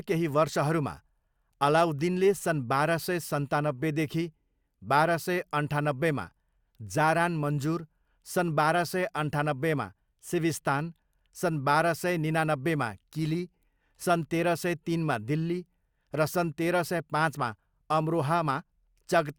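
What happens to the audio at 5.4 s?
Nothing goes wrong at 5.4 s: the speech carries on intact through that moment, with no dropout, click, distortion or other fault to be heard.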